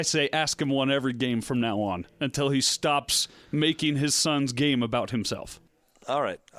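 The speech signal carries no audible technical faults at any point.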